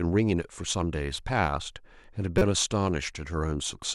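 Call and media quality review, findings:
Corrupt frame decoded, 2.38–2.42 s: short squeaky burst, about -10 dBFS, over one frame of speech. Decoder played a bit-damaged frame, misplacing energy across frequencies.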